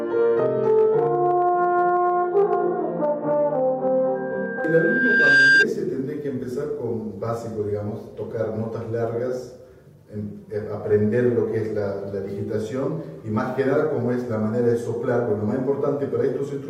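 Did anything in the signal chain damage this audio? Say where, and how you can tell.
Yes, there's a loudspeaker feedback squeal from 4.15 to 5.66 s, and it's an acoustic loop at the analogue end, with a speaker bleeding back into the mic. You hear a single tone at 1.6 kHz swelling over roughly a second and a half until it sits about 10 dB above the rest of the sound. That steady pitch and self-building rise mean the loop gain crept past one at that frequency and kept feeding itself.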